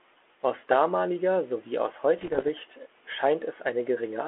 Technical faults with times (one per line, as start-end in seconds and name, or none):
2.18-2.49 bit errors on an ADPCM link